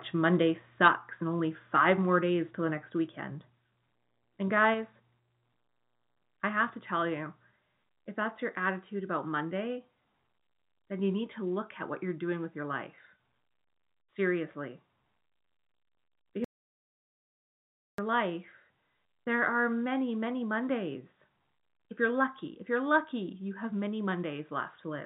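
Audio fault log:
0.83–0.88 s, microphone overload: a harsh, crackly edge on the peak just before "and only", clipping about 5 dB over full scale; likely input gain set too high.
0.88 s, 2.91 s, 4.74 s, microphone volume stepped down: speech and background abruptly drop by about 3, 1, then 3 dB, the second after "days till the next"; likely automatic gain reduction.
16.44–17.98 s, audio dropout to silence: speech cuts to dead digital silence for 1.54 s, resuming at "life there are many"; likely lost input.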